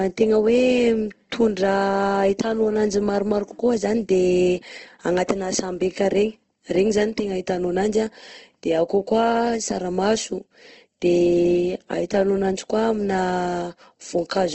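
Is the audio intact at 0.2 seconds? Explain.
No, the speech sounds grainy and rough at 0.2 s, as throughout, with nothing above 8.2 kHz, likely Opus compression filling starved bands with noise, fitting roughly 16 kbps.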